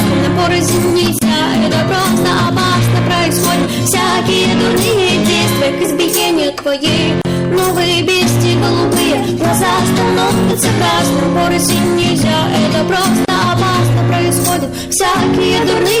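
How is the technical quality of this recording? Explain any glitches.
The quality is poor, with two faults. Hard clipping runs throughout: the signal is overdriven by about 10 dB, so close to a third of the waveform is flattened, adding harsh fuzz and high-frequency smear across the spectrogram. The gap at a join of encoded pieces falls at 1.19–1.22 s (27 ms), 7.22–7.25 s (34 ms) and 13.25–13.28 s (34 ms), six seconds apart. Untrimmed encoder delay and padding leave brief dropouts, seen as thin silent columns before the sound resumes.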